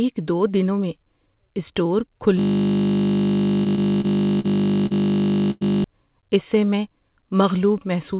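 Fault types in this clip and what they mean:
System hang loop: A frozen driver or system left the sound hardware replaying one 20 ms stretch of its ring buffer, repeated about 160 times from 2.39 s to 5.84 s. At a 50 Hz repeat rate, the speech turns into a steady mechanical buzz.
Repeated stalls (stutter): Late packets drained the jitter buffer four times between 3.64 s and 4.46 s, and the receiver extended the preceding sound each time. About 103 ms was filled, with the longest gap at 44 ms and nothing lost, so the speech drags and stutters.
Short stall from a late packet: At 4.86 s, one packet missed its slot and the receiver held the previous sound for 44 ms until it arrived, then resumed at the same point. No audio is lost, but one sound is stretched with a slight buzz or dip.
Call audio freeze: From 5.51 s to 5.63 s, the last sound is carried on as a fading buzz or hiss for about 103 ms, ending in roughly 10 ms of silence before speech resumes where it stopped. 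The likely cause is packets held up in transit, emptying the jitter buffer.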